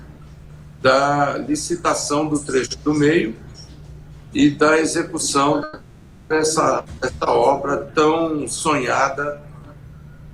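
A call audio freeze runs from 5.63 to 6.33 s. For 0.67 s the last sound is stretched into a fading buzz that never drops to silence. Packets were likely held up, so the jitter buffer ran dry. When they arrive, the audio resumes where it stopped, with nothing lost.

A skip ahead follows at 6.78 to 6.82 s. Roughly a fifth of a second of audio is dropped while later packets are already queued, and the two sides are joined almost directly. This removes part of the delay the freeze had added.

Jitter buffer slow-down then occurs three times: 6.82 to 7.18 s at 89% speed, 7.86 to 8.38 s at 88%, and 9.21 to 9.60 s at 85%. Each adds 49 to 68 ms by repeating pitch periods to rebuild the buffer's reserve. The sound drags at an unchanged pitch, drawn out.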